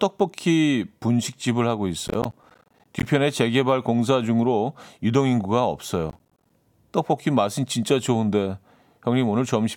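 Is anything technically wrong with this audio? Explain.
Yes. Processor overload crackle occurs from 2.08 to 3.05 s and again from 6.10 to 6.50 s. The processor repeatedly failed to deliver its small audio buffers on time, and each miss dropped in a short silent gap with abrupt edges. The gaps sound like roughly 10 ms buffers, with dozens missed in the first burst and fewer in the second. Strung together, they form a gritty, tearing crackle over the speech that stops once the load eases.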